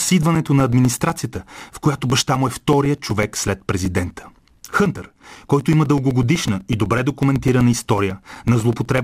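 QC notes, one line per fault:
0.10–8.98 s: periodic USB or driver dropouts, short gaps of a few milliseconds filled with silence every 0.125 s, heard as regular ticks wherever the speech is sounding.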